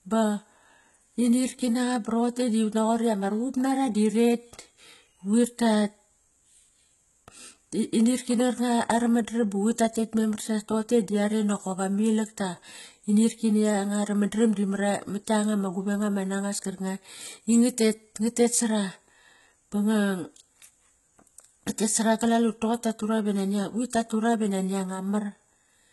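From start to finish, the speech has heavy HE-AAC compression damage. Nothing sounds above 11.8 kHz. The treble is synthetic, likely rebuilt by spectral band replication from copied lower bands. S sounds turn gritty and lispy, pointing to a very low bitrate near 16 kbps.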